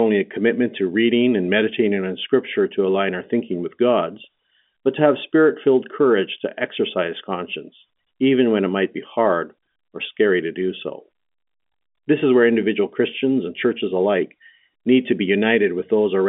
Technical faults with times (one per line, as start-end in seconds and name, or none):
none